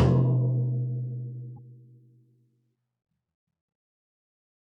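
The likely cause is a broken MP3 bit reservoir. Frames appear to have been cut from the stream, so the next frame reached back for borrowed data and read bytes belonging to another frame. From 1.56 to 1.59 s the sound jumps ahead and is briefly scrambled for about 30 ms. That is roughly one frame's worth, which fits MP3 frames of about 26 ms.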